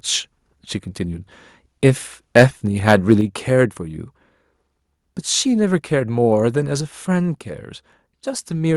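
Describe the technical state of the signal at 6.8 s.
At 6.81 s the speech and the background noise under it drop together by about 2 dB in a single step, a microphone volume stepped down event. The likely cause is the call software cutting the device's input volume because the level was running hot. On a waveform the envelope shrinks abruptly at that point and stays lower. On a spectrogram every frequency band dims at once along a sharp vertical edge.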